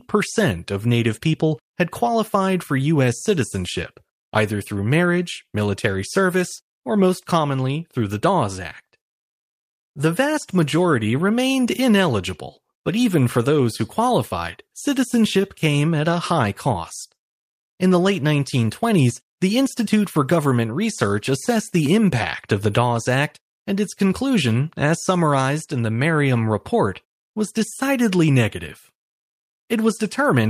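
Nothing in this speech recording points to a technical fault at any moment.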